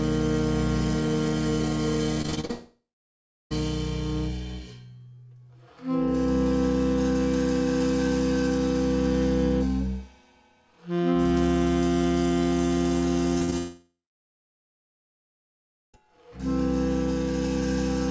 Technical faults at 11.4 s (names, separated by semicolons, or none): none